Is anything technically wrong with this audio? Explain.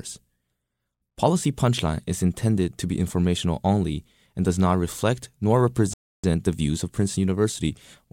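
Yes. At 5.93 s, right after "does not reflect nor", the speech cuts out for about 0.3 s; this playback stall likely comes from the player running dry or its thread being blocked. From 6.24 s to 8.08 s, speech runs hurried at normal pitch. This is time-compressed catch-up: the player trims and cross-fades small slices, playing about 1.1 times faster to clear its backlog.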